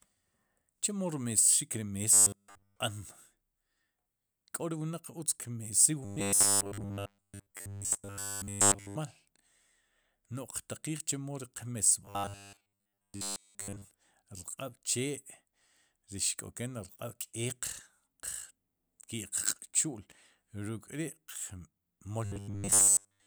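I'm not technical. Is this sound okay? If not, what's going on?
No. There is robotic sound from repeated short buffers at 2.13–2.76 s, 6.05–8.96 s, 12.05–13.91 s (just after "chemo ri") and 22.25–23.26 s. The speech turns into a stiff, metallic buzz at a steady 100 Hz. The likely cause is new audio arriving too slowly, so the player keeps replaying the last 10 ms or so, entirely in the first stretch and for most of the later ones.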